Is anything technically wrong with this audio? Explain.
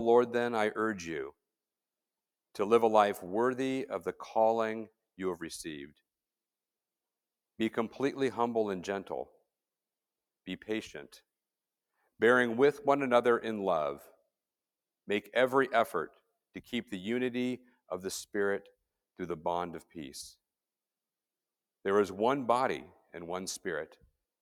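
No, nothing stood out as technically wrong on listening.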